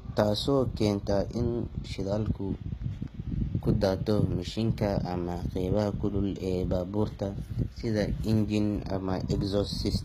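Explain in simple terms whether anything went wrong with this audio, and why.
Yes, something's off for the whole clip. The treble in this speech sounds rebuilt rather than real, with gritty, metallic s sounds and nothing above about 15 kHz. That points to likely HE-AAC compression, which fakes the top end by copying lower bands upward.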